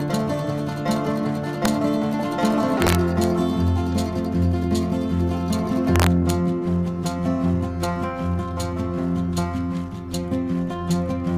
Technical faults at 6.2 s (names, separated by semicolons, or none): integer overflow